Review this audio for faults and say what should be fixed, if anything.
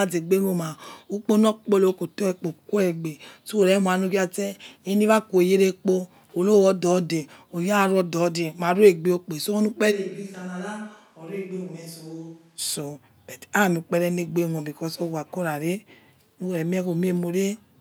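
From 9.93 s to 12.57 s the speech abruptly turns roomy and hollow, thins in the bass, drops by roughly 10 dB, and carries a bed of room noise about 35 dB below the speech, then snaps back just as suddenly. This is likely a switch to a distant microphone: for about 2.6 seconds the close mic's signal was lost or left out of the mix and a farther pickup, such as a camera mic, filled the gap. To prevent it, secure and monitor the close mic's connection during recording and keep a backup close mic on a separate track.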